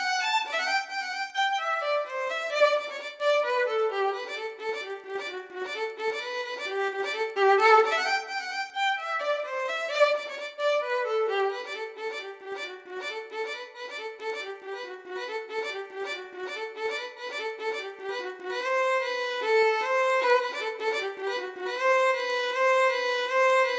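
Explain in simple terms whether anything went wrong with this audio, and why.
A steady ticking runs through the whole clip, about ten small clicks every second, riding on the sound wherever there is any. This is a resampler restarted on every block. The audio was converted to a lower sample rate, which fits a change from 48 kHz to 16 kHz, in 100 ms chunks. Each chunk was converted on its own, so the converter lacked its neighbours at every seam and left a tiny error there, ten times a second.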